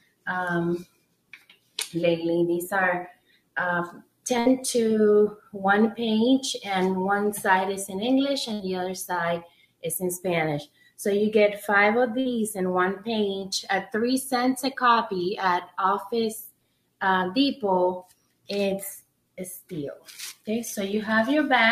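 Throughout, the sound pumps and thins, sustained parts and tails sinking by some 15 dB while attacks survive: a noise suppressor applied to music or sounds, mistaking steady material for noise. The sound cut by the noise suppressor drops by about 21 dB from 0.0 to 0.26 s, 0.84 to 1.78 s and 3.12 to 4.26 s. At 4.39 s a brief fading smear replaces about 60 ms that never returns, a burst of packet loss concealed by stretching the last sound before playback skips ahead. Another suppressor cut follows at 5.37 to 5.54 s, about 16 dB deep, then a second packet loss burst at 8.53 s. Further cuts of about 21 dB come at 9.42 to 9.84 s and 10.65 to 10.99 s, a third packet loss burst at 12.20 s, and final cuts at 16.47 to 17.01 s and 18.03 to 20.48 s.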